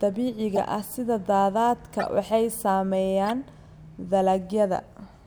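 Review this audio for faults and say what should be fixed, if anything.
Corrupt frame decoded at 0.56–0.58 s, 1.99–2.03 s and 3.25–3.31 s. Bit errors in compressed frames were decoded anyway, so misread gains and codes put energy at the wrong frequencies. Each event is a short chirp-like burst spanning a few frames, loudest at the first. Prevent it by checksumming each frame and concealing any that fail rather than decoding them.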